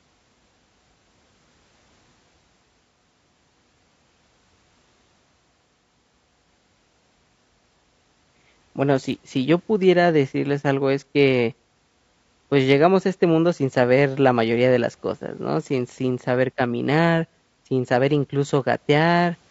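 Throughout this speech clip the voice sounds rough and grainy, with noise filling the gaps between pitch harmonics. This is likely low-delay AAC compression (AAC-ELD), whose short frames resolve harmonics poorly and spend bits fast, fitting a bitrate around 32 kbps.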